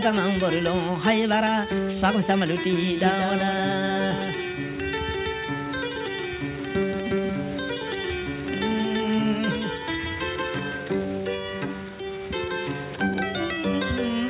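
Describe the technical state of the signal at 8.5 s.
At 8.5 s a doubled audio track is audible, running from 2.73 s to 10.79 s. A full-band copy trails the original by about a fifth of a second, roughly 5 dB quieter, with no decay or room colour. It likely comes from a second, slower capture path. The band stops at 4 kHz, as expected from the call path.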